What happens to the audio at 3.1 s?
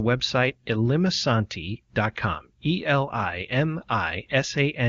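Nothing goes wrong at 3.1 s: the speech there passes intact, with the AMR wideband (HD Voice) coding at a high enough rate that it leaves at most faint traces.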